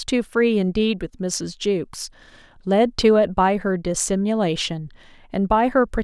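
Listening to the speech, nothing stood out as a technical problem at any point.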